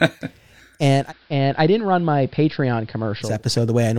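At 0.90 s the speech blends from digital radio to analogue AM over about 230 ms, returning at 3.43 s. The spectrogram shows the treble reduced, with faint hiss well beneath the signal, and the waveform drops by about 4 dB.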